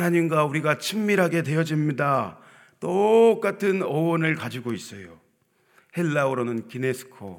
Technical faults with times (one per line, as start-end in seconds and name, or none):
none